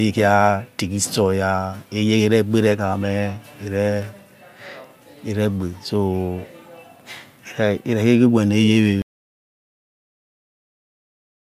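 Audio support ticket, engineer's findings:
Audio dropout to silence, 9.02 s to end of clip. Speech cuts off mid-flow and never returns. Remainder is silence, with no room tone or noise floor. Probable component: input device or link. Likely cause: input lost through disconnect, failed link or stray mute while recorder kept writing silence. Content after 9.02 s not recoverable.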